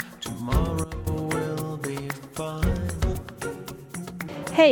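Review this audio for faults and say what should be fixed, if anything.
From 0.84 to 1.07 s, a sudden gain jump drops the sound and background noise together by about 12 dB, likely an unramped digital gain change. Smooth every gain change over a few milliseconds instead of switching between adjacent samples.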